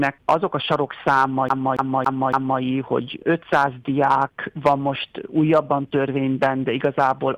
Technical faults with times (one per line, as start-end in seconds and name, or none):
1.49-2.60 CD stuck on one turn